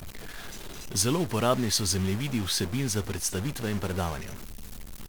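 The speech has a harsh, buzzy grit throughout, and the pauses fill with hiss instead of going quiet. That's a stuck bit, likely one converter bit frozen, throwing roughly half the samples off by a step of about -35 dBFS.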